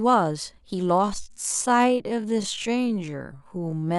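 At 1.0 s the speech abruptly slows to about 0.55 times its pace and stays slow to the end. The pitch does not drop. This time-stretched section drags. Software likely lengthened the audio by repeating short pieces.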